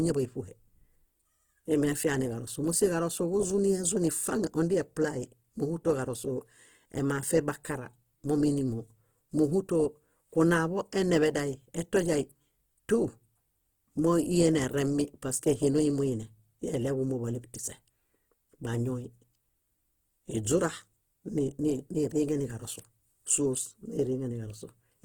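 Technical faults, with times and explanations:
Throughout, Opus compression: the speech has a grainy, rough texture, turned noisy rather than carved into swirly holes. The top end still reaches about 20.1 kHz, so it stays fullband and not muffled. That points to Opus in its CELT mode at a low rate, likely around 16 kbps. The encoder keeps each band's energy but fills starved bands with folded or noise-like content, which is where the grit comes from.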